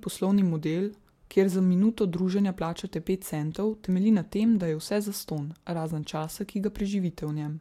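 A speech recording whose signal stays technically intact throughout, with nothing wrong to point to at any moment.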